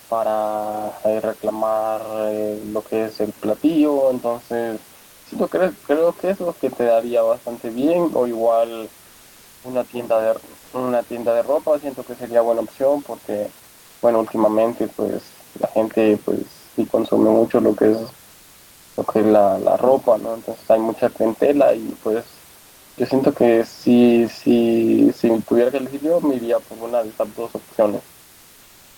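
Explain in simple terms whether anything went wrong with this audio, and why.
Comfort noise in place of the background appears at 4.99, 13.69 and 22.63 s, each under a third of a second. The room hiss turns flat and featureless, likely because the sender stopped transmitting during silence.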